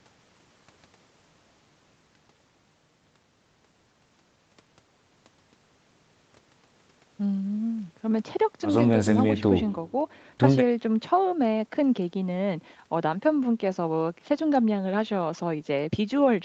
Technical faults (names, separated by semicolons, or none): none